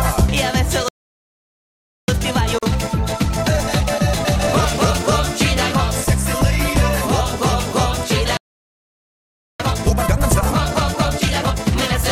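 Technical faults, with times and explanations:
0.88–2.08 s and 8.37–9.60 s, playback stall: the sound stops mid-flow for about 1.19 s each time, then resumes. The output likely went silent because the player ran out of data or its thread was blocked. At over a second, each silence is far longer than a join gap.
2.08–5.12 s and 9.60–11.96 s, time-compressed catch-up: after each stall the audio plays hurried, at 1.25× and then 1.5×, with its pitch unchanged. The player is cutting out small pieces and cross-fading them to clear its backlog. Unlike sped-up playback, the pitch does not rise.
2.59 s, gap at a join of encoded pieces: a 41 ms gap with smeared edges opens in continuous sound, which then carries on from where it stopped. Separately encoded pieces were joined untrimmed, so start delay and last-frame padding remain. Unlike a stall, it is brief.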